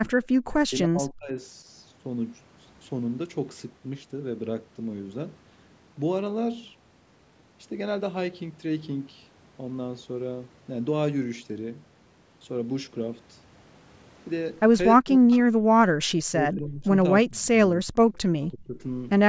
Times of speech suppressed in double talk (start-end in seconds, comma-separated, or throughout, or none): 0.67-1.66, 14.96-15.85, 16.36-16.85, 17.23-17.93, 18.52-18.82